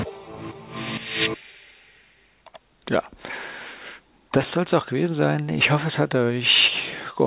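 No faults can be heard; the audio carries the narrowband character of a telephone-style call path, with nothing above 4 kHz and the usual coding noise of a G.711 mu-law codec.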